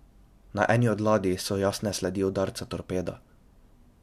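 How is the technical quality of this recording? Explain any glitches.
No glitches are audible anywhere in the recording, which holds together as continuous speech with no dropouts, clicks or timing faults.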